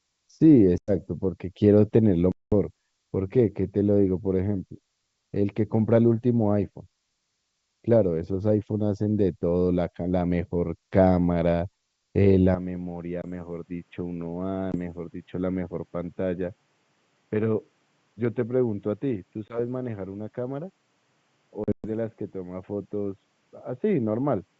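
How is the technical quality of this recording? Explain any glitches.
The recording has two kinds of fault: repeated dropouts from packet loss on an ADPCM call, and a lasting drop in quality from 12.55 s. The G.722 wideband coding itself leaves little trace.

Packet loss on an ADPCM call occurs at 0.78 to 0.92 s, 2.32 to 2.53 s, 13.22 s, 14.72 s, 19.49 to 19.60 s, and 21.64 to 21.87 s. The gaps run from about 20 ms to 200 ms. The last one is scattered, with its longest run at 120 ms. Lost packets become hard-edged silence. The decoder's predictor and step size then lag behind the sender's, so the speech resumes slightly distorted before settling.

From 12.55 s to the end, the sound turns duller and about 10 dB quieter. Nothing comes through above 3.8 kHz, and a new noise floor sits roughly 40 dB below the signal. The change is abrupt, with no gap. The likely cause is an input switched to a poorer device with a narrower band.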